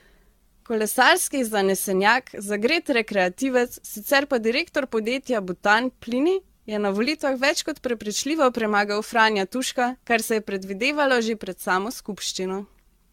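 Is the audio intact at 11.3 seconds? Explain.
No. Generation loss runs through the whole clip, including 11.3 seconds. The speech was likely decoded and re-encoded around seven times with a lossy codec, which fits AAC-LC near 96 kbit/s. Each pass requantises on a shifted frame grid, so the result sounds swirly, hollow and smeared, with blurred attacks.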